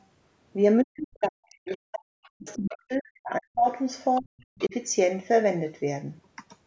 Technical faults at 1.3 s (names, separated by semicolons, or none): speech suppressed in double talk; other side's voice leaking through